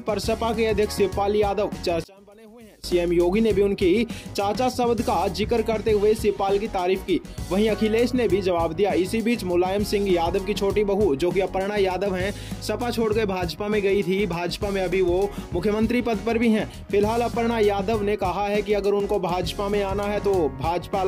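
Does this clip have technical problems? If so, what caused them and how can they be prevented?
Yes. From 2.04 to 2.84 s the sound abruptly drops by about 25 dB and turns faint, then returns at full level. This is likely one channel inverted. With one stereo channel in reversed polarity, whatever the two channels share cancels when they are summed to mono, leaving only their small difference. To prevent it, check polarity on every channel and monitor a mono fold-down before release.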